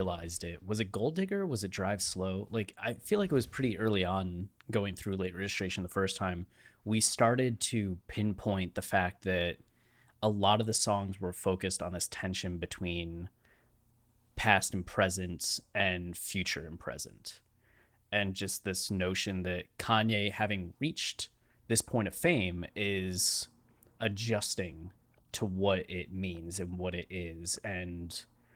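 No faults are audible in this speech; the Opus voice coding, which sounds like about 24 kbps in hybrid mode, keeps the full band with content reaching about 20.2 kHz and leaves only light coding traces.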